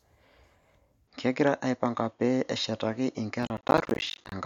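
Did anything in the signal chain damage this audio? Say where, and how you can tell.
Yes. From 1.08 s to the end the sound abruptly turns duller, with nothing above 7 kHz, a faint new noise floor about 50 dB down, no gap and no level jump. The likely cause is the input switched to a poorer device at the driver stage.

From 3.43 s to 4.32 s a gritty processor overload crackle rides on the sound: dozens of tiny hard-edged silent gaps, which fits roughly 10 ms buffers missing their deadlines again and again at the driver or buffer stage.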